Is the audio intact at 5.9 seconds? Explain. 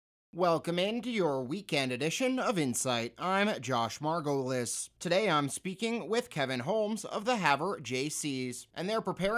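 Yes, the speech at 5.9 seconds is intact, with no dropout, click, distortion or other fault at that moment.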